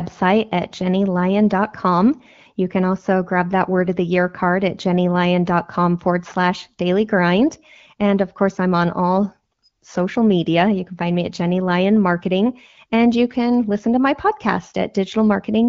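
No technical faults occur in this speech, which is carried over AMR wideband (HD Voice) coding at 15.85 kbit/s, a rate that keeps it clear.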